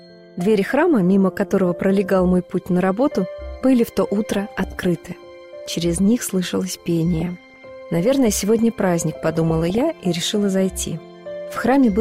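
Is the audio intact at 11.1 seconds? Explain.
Yes, the audio is intact at 11.1 seconds, with no dropout, click, distortion or other fault at that point.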